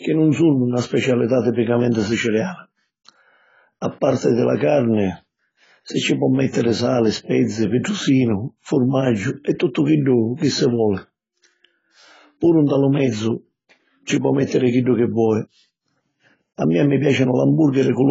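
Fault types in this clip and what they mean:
AAC compression: the speech is dull, smeared and fizzy, with nothing above 7.6 kHz, likely heavy AAC-LC coding at a low bitrate around 16 kbps.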